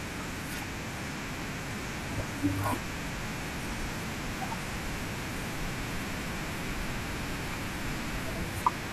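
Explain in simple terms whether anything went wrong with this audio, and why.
Something did go wrong: the speech has periodic USB or driver dropouts. From 0.18 s to 8.85 s, roughly 2 ms of sound is skipped every 0.25 s, causing steady ticks. Their clockwork-regular spacing, rather than scattered clicks, points to the connection stalling at fixed intervals.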